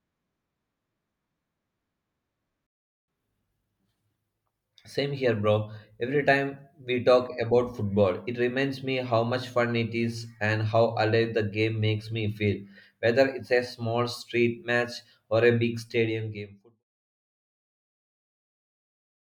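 At 2.67 s the speech cuts to silence and stays silent until 3.08 s, then resumes exactly where it stopped. This is a rebuffering stall: the player ran out of downloaded audio, halted playback and waited for more data to arrive. No audio is lost, but the gap adds about 0.42 s to the running time. The level later falls away in a gradual fade-out from around 15.5 s to 16.84 s.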